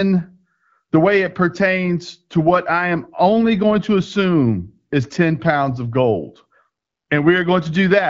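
No technical faults are audible anywhere in this recording.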